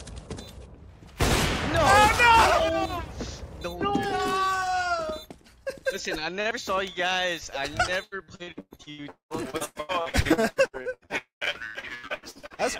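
Repeated packet loss (robotic sound) runs from 8.03 s to 12.61 s. Dozens of short holes break up the audio, the longest about 0.2 s. Each one is patched by stretching the last sound, so the audio turns choppy, with pieces missing. The patches add up to roughly 2 s, close to half of that stretch. At 11.18 s to 11.44 s a long network dropout likely causes a deeper break: about 240 ms of audio is gone. The sound before it trails off as a brief fading buzz or hiss, then about 130 ms of silence follows. The audio resumes further on, without the lost portion.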